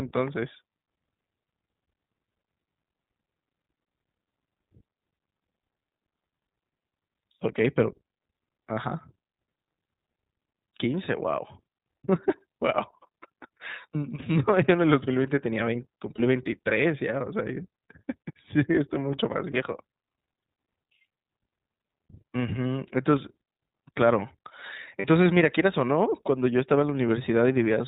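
The whole recording has passed through the iLBC codec, a narrowband VoIP coder working in 20 ms frames at a rate that points to its 15.2 kbps mode. Nothing above 4 kHz survives, and the speech sounds plainly rough and slightly synthetic throughout.

Lost iLBC frames then force the decoder to conceal gaps by repeating the last pitch cycle blended with noise. This happens at 16.16 s and 19.52 s for about 20 ms each, and at 25.00 s for about 40 ms. Each gap sounds like a brief held, buzzy vowel, and normal sound returns almost immediately.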